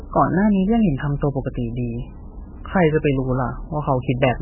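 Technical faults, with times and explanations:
Throughout, MP3 compression: the speech has nothing above 3 kHz and a heavily watery, swirling texture, with consonant attacks smeared. This is likely an MP3 encoder starved of bits, pointing to a very low rate around 8 kbps. With so few bits it cuts the treble at a fixed frequency and zeroes weaker frequency lines, which flicker on and off from frame to frame, producing the swirl and the dull, band-limited sound.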